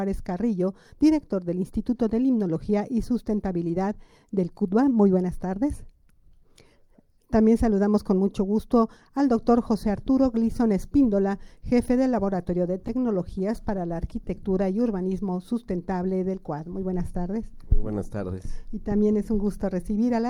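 Between 12.71 and 14.32 s the audio picks up a string of tiny ticks and brief smears, around ten of them, each lasting only about 10 ms, while the sound stays clear in between. These are scattered short gaps: packets went missing or arrived too late at isolated points, and the receiver covered each hole by stretching the preceding sound forward. Roughly a hundred milliseconds in total was filled this way, about 7% of that stretch.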